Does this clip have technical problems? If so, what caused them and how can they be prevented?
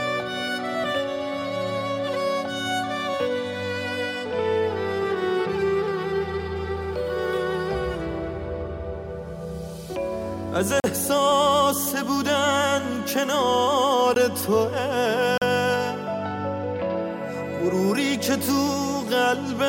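Yes: the program failed to fill its output buffer in time, leaving blocks of digital silence at 10.80–10.84 s (40 ms), 14.14 s (16 ms) and 15.38–15.42 s (40 ms). The sound cuts out and back with no fade. Prevent it with larger buffers and real-time priority for audio processing.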